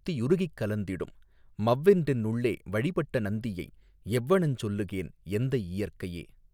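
No technical faults occur at any point in the recording.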